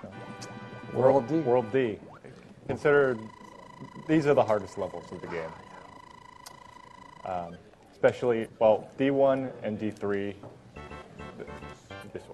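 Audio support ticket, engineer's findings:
Audio jumps ahead at 2.65 s and 8.41 s. Compressed frames skipped: decoder dropped missing or damaged frames, losing roughly 50 ms and 100 ms of audio.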